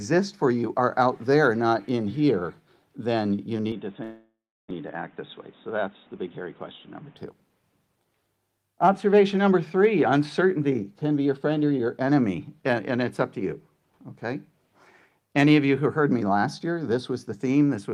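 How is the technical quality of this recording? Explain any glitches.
Three separate glitches land close together in the first half, all between about 3.7 and 7.2 s.

From 3.72 to 7.17 s the sound turns dull and boxy. Nothing comes through above 3.8 kHz, the level drops by about 5 dB, and a new background noise sits roughly 30 dB under the signal. There's no gap at either change. It's likely an input switched to a poorer device: the system hopped to another mic or a headset call profile with a narrower band and its own noise floor, then switched back.

Inside that stretch, from 4.03 to 4.72 s, there's what's likely a long network dropout. About 600 ms of audio never arrived. The receiver covered the hole by stretching the last bit of sound into a fading buzz or hiss, and that concealment ends in around 350 ms of silence. The sound then picks up again further along, with the lost piece simply gone. 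Playback delay shifts by something like 50 ms across the gap.

From 5.70 to 6.42 s you get a jitter buffer speed-up. The buffer was holding more audio than it wanted, so the receiver trimmed out tiny slices, one or a few pitch periods at a time, removing around 50 ms in total. The result runs at about 107% speed with the pitch unchanged, so that bit sounds a little rushed.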